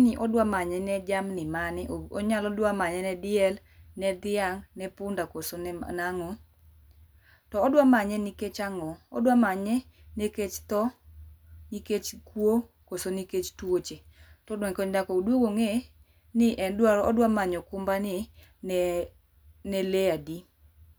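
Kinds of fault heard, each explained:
No technical faults are audible.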